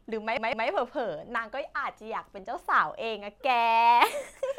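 From 0.37 to 0.68 s the speech stutters with repeated frames. A block of about 157 ms plays twice more, which fits roughly six compressed frames being sent again. The same fragment loops back. The speech runs about 314 ms longer.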